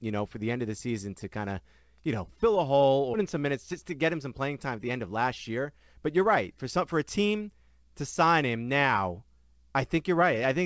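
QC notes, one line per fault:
3.14 s, skip ahead: about 0.7 s of speech vanishes and both sides join directly, with no silence or filler, unlike a concealed packet loss.
3.36–4.48 s and 4.97–7.50 s, jitter buffer speed-up: trimmed pitch periods drain the backlog, so speech runs 7% then 9% fast at unchanged pitch.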